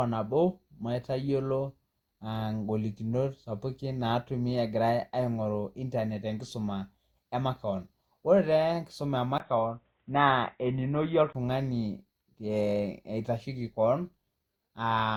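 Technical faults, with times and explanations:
Throughout: generation loss. The sound is swirly, hollow and smeared, with soft attacks. It's likely from about four lossy re-encodes, which fits Opus around 64 kbit/s.
9.38–11.35 s: input switched to a poorer device. After a 20 ms gap, the sound goes dull and boxy, with nothing above 3.8 kHz. The level holds steady, and a faint new noise sits far below. It's likely a headset or lesser microphone.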